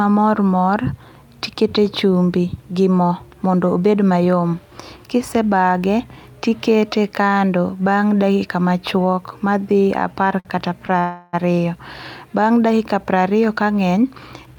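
At 10.40 s the speech hangs on its last sound for about 50 ms, a brief held sound, then carries on exactly where it left off. A second, shorter hold follows at 10.87 to 10.91 s, lasting about 19 ms. These are short stalls from a late packet: the packet missed its slot, the jitter buffer ran dry, and the receiver stretched the previous audio until it arrived. Nothing is lost, but each stall pushes the speech later.

From 10.99 to 11.35 s the sound freezes for about 342 ms. The last sound is drawn out into a fading continuation that never drops to full silence, and then the speech resumes from the same point. This is a call audio freeze, likely caused by packets being held up in transit so that the jitter buffer emptied and the receiver had to fill the wait. No speech is skipped, but the freeze puts a gap into the flow and adds roughly a third of a second of delay.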